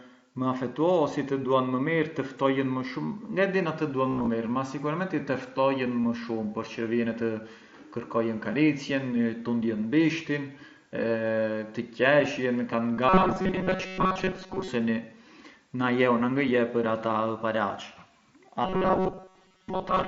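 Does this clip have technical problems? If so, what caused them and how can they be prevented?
Yes, two kinds of problems.

Concealed Bluetooth headset packet loss shows up at 4.10 to 4.27 s, where about 105 ms of audio went missing in scattered bits across roughly 180 ms, the longest gap only 15 ms. There are smaller drops at 6.03 s and 12.96 s. The phone papered over each hole by repeating the best-matching slice of recent waveform, so you get a brief buzzy smear and a slight warble as real audio resumes. Keeping the headset close to the phone, with no body or other 2.4 GHz traffic in the way, should prevent it.

There is also a robotic sound from 13.09 to 14.68 s and from 18.65 s to the end. The speech turns into a stiff, metallic buzz at 188 Hz that still loosely tracks the talking. That pitch corresponds to a period of about 5.3 ms, so the likely cause is the playback side starving and looping a roughly 5 ms buffer over and over, with most of the real audio in those stretches skipped. 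Giving the audio path a larger buffer and keeping CPU load down on the receiving device should stop it.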